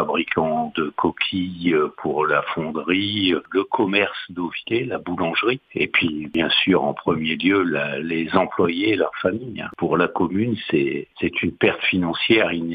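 Faint, regular clock slip clicks run from 0.28 to 12.32 s, about every 0.7 s, likely from two unsynchronised clocks drifting roughly 40 ppm apart, slipping one sample each time.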